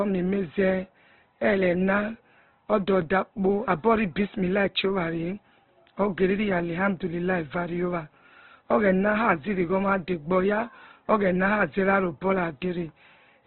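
From start to finish the speech sounds muffled, rough and grainy, with nothing above 4.2 kHz. This points to heavy Opus compression, likely at a very low bitrate near 12 kbps, where the encoder narrows the bandwidth and fills starved bands with noise.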